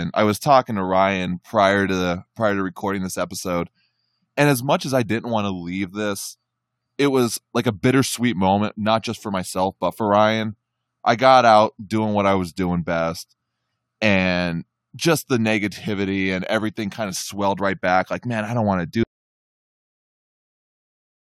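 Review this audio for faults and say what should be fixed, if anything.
An audio dropout to silence starts at 19.03 s, straight after "i don't want to", and lasts to the end, about 2.25 s of total silence with no room tone. The input was likely lost through a disconnected device, failed link or stray mute while recording continued. Securing connections and monitoring the input with a silence alarm during capture would prevent this.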